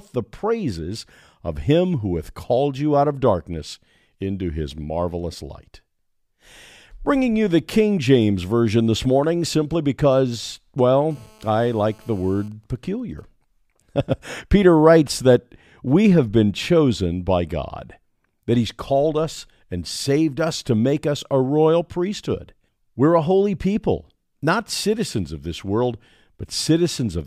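Just after "this morning simply because", at 11.11 s, a GSM phone buzz starts and runs to 12.48 s. A 2G handset close by is in a call, transmitting radio bursts about 217 times a second. Some part of the audio circuit is rectifying those pulses and turning them into an audible signal. The result is a hard, raspy 217 Hz buzz with a dense stack of harmonics, steady throughout and about 32 dB below the speech. It bears no relation to what is being said.

From 12.52 s to 13.24 s the buzz gives way to GSM signalling bursts. The phone is still in the call, but its user has gone quiet, so the handset only sends short groups of bursts at the same 217 Hz rate. Rectified the same way, these come through as even ticks with a longer 217 Hz buzz twice a second, quieter than before, roughly 40 dB under the speech.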